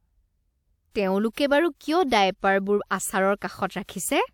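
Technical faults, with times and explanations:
0.91–0.95 s, 1.33–1.37 s, 3.36–3.42 s and 3.84–3.89 s: pre-echo. A short hiss arrives 43 to 58 ms before each sharp speech onset. The codec spread the attack's quantisation noise across its whole block, into the quiet beforehand. Each attack sounds softened and smeared.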